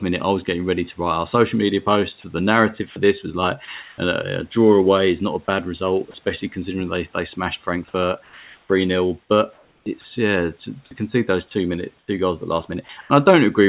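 Sound chopped by the voice detector occurs at 2.9–3.98 s, 9.53–10.04 s and 11.99–13.1 s, the last just after "concede those two minute". The sender's detector likely toggled repeatedly, swapping about 0.24, 0.36 and 0.21 s of speech for comfort noise. The result is choppy speech.

Sound dropped by the voice detector occurs at 6.11–6.14 s, between "not a bad result" and "considering they they smashed", at 8.24–8.69 s, and at 10.85–10.91 s, just before "concede those two minute". The detector likely mistook quiet speech for background and stopped sending, so about 20, 170 and 40 ms of speech vanish under steady comfort noise until it retriggers.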